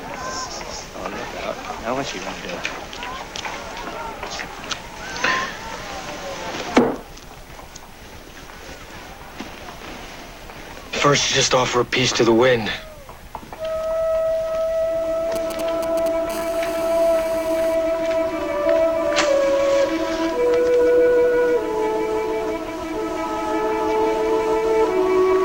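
GSM signalling bursts run from 15.36 to 16.32 s: a nearby 2G phone sending short groups of radio bursts at 217 Hz, which the audio circuit rectifies into a galloping dit-dit-dit of ticks and brief buzzes, sitting roughly 10 dB below the sound.

GSM phone buzz follows at once, from 16.32 to 17.75 s, as the phone settles into a call and transmits continuously at 217 bursts per second. The rectified pulses give a steady, hard, raspy 217 Hz buzz rich in harmonics, about 17 dB below the sound.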